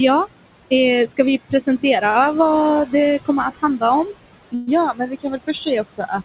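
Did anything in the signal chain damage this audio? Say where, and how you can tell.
Yes. The damage comes from call processing and the network path. The capture itself is not at fault: the room noise sits about 13 dB under the speech, and the audio stops at 4 kHz, which fits a narrowband call codec such as G.711.

Noise suppressor artifacts run through the whole clip. This is call processing. The suppressor pulls the steady background down by about 21 dB in the bands it classifies as noise, updating frame by frame. As a result the noise floor drops away between phrases and comes back up under them.

Speech cut by the noise suppressor happens at the same stage. It occurs at 1.50 to 1.84 s (about 15 dB down), at 3.55 to 3.83 s just after "kommer att" (about 20 dB), at 4.92 to 5.49 s (about 19 dB) and at 5.88 to 6.12 s (about 20 dB). In each case the suppressor mistook quiet speech energy for noise and turned it down with the background. 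Roughly a tenth of a second is affected in the first two spans, about 0.4 s in the third and about 0.15 s in the fourth. The speech there sounds swallowed or faint.

A short stall from a late packet occurs at 2.10 to 2.17 s. This is the network and jitter buffer stage. A packet missed its playout time and the buffer ran dry. The receiver covered the gap by extending the last sound for 47 ms and then resumed at the same point. Nothing is lost, but the sound is held slightly too long, with a slight buzz or dip, and the playout delay grows by that 47 ms.

A call audio freeze occurs at 4.55 to 4.69 s. The receiver stretches the final sound into a decaying buzz or hiss for 124 ms. The buzz never reaches silence, and the audio picks up again exactly where it left off, so a gap has been inserted but no content is missing. The likely cause is a burst of packets held up in transit, which emptied the jitter buffer for longer than at 2.1 s and added 124 ms of delay.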